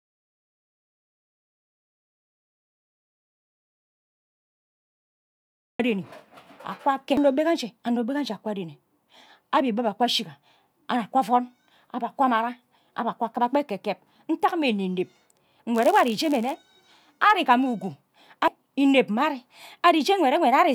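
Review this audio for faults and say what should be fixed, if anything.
Audio dropout to silence, from the very start to 5.79 s: the clip opens in silence with no room tone, so the input was likely lost while the recorder kept writing zeros, and whatever was spoken there is unrecoverable. Prevent it by securing connections and checking input levels before recording begins.

Block size mismatch (padded), 15.74 to 16.55 s: a buzz at about 91.5 Hz appears because one stage hands over shorter blocks than the next reads, leaving a zero-filled gap in each block and slowing the speech to 0.996 of its speed. Prevent it by matching buffer sizes across every stage of the chain.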